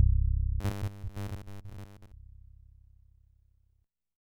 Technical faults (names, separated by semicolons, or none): robotic sound from repeated short buffers